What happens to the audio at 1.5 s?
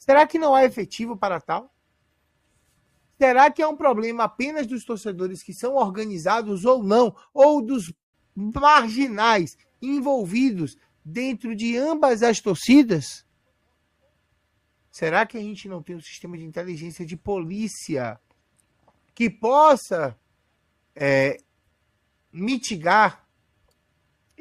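At 1.5 s the treble is dull and codec smearing is audible, until a sudden, gapless lift at 2.0 s: an adaptive stream starting at a low bitrate, consistent with roughly 32 kbit/s Opus stepping up to 64.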